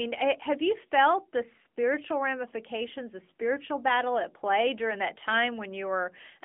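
Across the whole speech clip the AMR narrowband mobile codec is plainly audible: nothing above 3.6 kHz survives, and the low end thins below about 250 Hz, leaving a 250 Hz to 3.5 kHz phone-line band. Unlike a plain telephone filter, which only narrows the band, this codec rebuilds the voice from a vocal-tract model and sparse pulses, so it sounds buzzy and synthetic. That texture fits a mid-rate mode of roughly 10 kbps.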